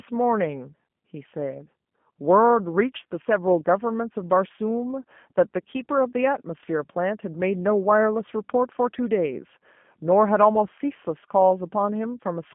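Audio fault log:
Throughout, G.729 codec: the speech has that squeezed telephone sound, limited to a band of roughly 150 Hz to 3.4 kHz, so there's no air or sparkle up top and not much weight underneath. The coding damage is plainly audible, a slightly rough, synthetic edge, because the codec doesn't send the waveform itself. At what sounds like 8 kbit/s it rebuilds each short frame from a vocal tract filter, a pitch estimate and a handful of pulses, and that shows.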